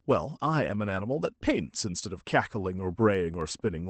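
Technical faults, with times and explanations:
0.87 s, lost packet rebuilt from error correction: a brief rough, noisy patch without any gap, as a lower-quality backup copy filled in for what sounds like one missing 20 ms packet.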